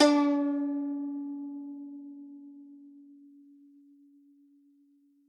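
From 1.80 to 3.25 s the music loses its topmost air, turning slightly dull and veiled before brightening again. This is channel delay (comb filtering): one channel runs a tiny fraction of a millisecond behind the other, which fits a delay of about one sample, and when the two are summed to mono the shared content cancels progressively toward the top of the spectrum, with the first notch falling near 20 kHz.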